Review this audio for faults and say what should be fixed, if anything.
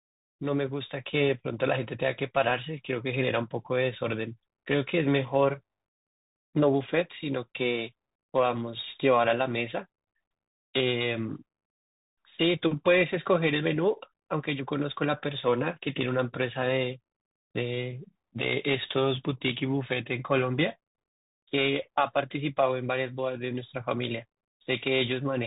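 Bluetooth CVSD headset codec damage runs through the entire clip: the speech has nothing above about 3.8 kHz. CVSD encodes one bit per sample, each bit saying only whether the waveform steps up or down, with an adapting step size. Fast, loud high-frequency energy outruns the step, so s sounds come out scratchy and distorted, and a granular hiss sits under the speech. The plainly audible damage fits the 64 kbps headset link. To prevent it, record through a wired microphone or a wideband Bluetooth profile rather than the headset's narrowband call mode.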